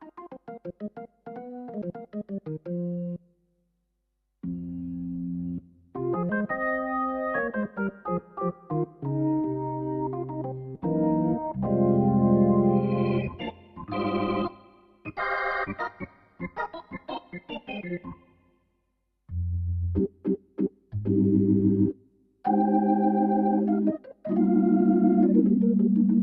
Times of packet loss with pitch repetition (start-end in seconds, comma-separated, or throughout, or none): none